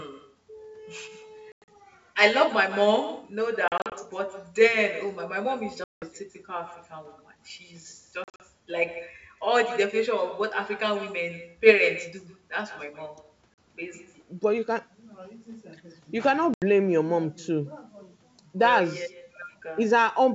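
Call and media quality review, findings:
Echo with no canceller, whole call: far-end speakerphone loops our audio back about 12 dB down, roughly 150 ms late. Thin shadow on everything. Far end isn't cancelling.

Packet loss on the ADPCM call at 1.52–1.69, 3.68–3.93, 5.84–6.04 (worst, 180 ms lost), 8.24–8.41, 13.54–13.58 and 16.54–16.63 s. Hard silent holes, then slightly distorted recovery while the decoder's predictor and step size resync. The G.722 wideband coding itself sounds clean.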